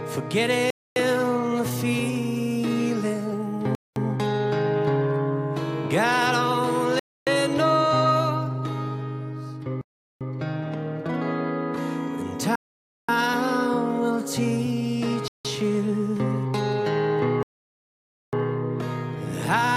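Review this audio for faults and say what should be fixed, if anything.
A likely Bluetooth stall, where delayed packets let the headphone buffer run dry, cuts the sound to silence at 0.70, 3.75, 6.99, 9.81, 12.56, 15.28 and 17.43 s. Each gap lasts 0.17 to 0.9 s before playback picks up again. To prevent it, keep the phone close to the headphones with a clear line of sight and move away from crowded 2.4 GHz sources such as busy Wi-Fi routers.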